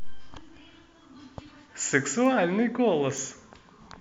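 Bit error spikes at 2.26 s and 3.18 s: a single flipped bit briefly throws one sample to about -24 dBFS, heard as an isolated, broadband tick unrelated to the speech.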